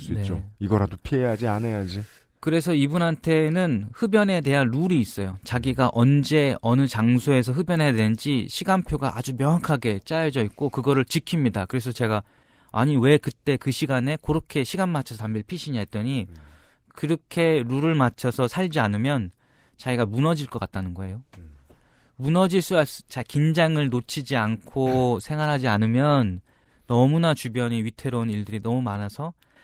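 No technical faults occur anywhere in the speech.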